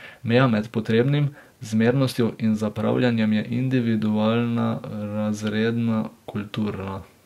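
A time-stretched section runs from 0.0 to 3.52 s, where the speech plays about 1.47 times faster than normal yet keeps its natural pitch. This was likely a stretch done in software to squeeze the passage into a shorter length, with short slices of the waveform dropped to keep the pitch unchanged. The result sounds rushed, and the pace shifts abruptly back to normal speed at 3.52 s.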